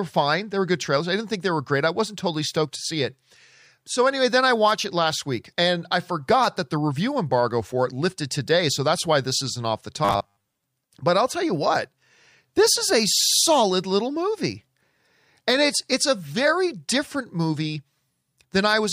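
From 10.05 to 10.62 s the speech turns into a rigid, metallic buzz fixed at 100 Hz: robotic sound from repeated short buffers, likely caused by late audio being padded by looping a 10 ms chunk, with about half the real signal skipped.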